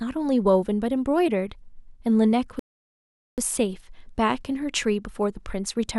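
At 2.59 s the player's buffer runs dry: downloaded audio runs out and playback halts until more data arrives, a rebuffering stall. The speech drops to silence for 785 ms, then resumes at 3.38 s exactly where it stopped, with nothing skipped but the gap added.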